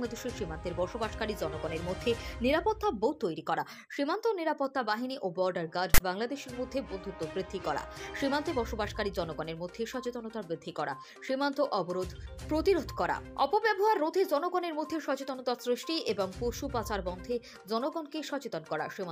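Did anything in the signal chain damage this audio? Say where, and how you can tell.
Yes, at storage: a hard-edged 60 ms burst at 5.94 to 6.00 s, a rasp then dead silence. That's file tags played as audio, text bytes read as samples, then zero padding.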